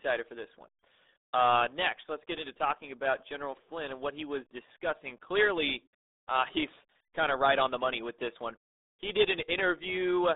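A speech recording heard throughout through the RealAudio 14.4 codec, the early dial-up speech coder. The passband runs from about 250 Hz to 3.7 kHz, with nothing at all above 3.8 kHz, so sibilants and consonant detail are gone and the voice sits muffled in a narrow telephone-like band. Coding damage is heavy. The voice has a gargly, watery texture as the coder struggles to model it, which fits a bitrate near 8 kbit/s.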